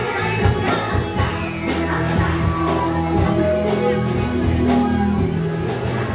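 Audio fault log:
No faults heard anywhere in this clip.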